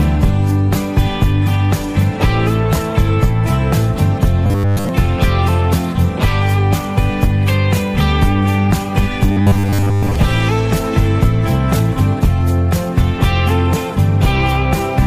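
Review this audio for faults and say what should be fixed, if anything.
Audio likely arrived too seldom for playback, so the software filled the gaps by looping a short buffer of about 10 ms while most of the real audio in those stretches was skipped. This is the robotic sound from repeated short buffers, heard from 4.45 to 4.89 s and again from 9.32 to 10.16 s as a rigid, metallic buzz locked at 100 Hz. Keeping the input buffer large enough to absorb delivery delays would prevent it.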